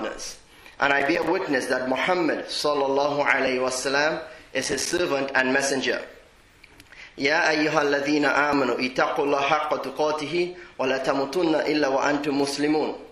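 From 1.00 to 1.27 s and again from 4.63 to 4.99 s, processor overload crackle: buffers of about 5 ms miss their deadlines in quick succession, each dropping to silence with hard edges. The second burst is denser, roughly twenty dropouts against roughly ten, and sounds like gritty tearing over the audio.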